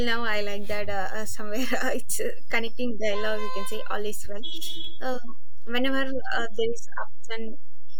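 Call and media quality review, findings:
No audible change to the speech; DC offset throughout, a constant shift of about -18 dBFS that eats headroom and sits as steady energy at 0 Hz.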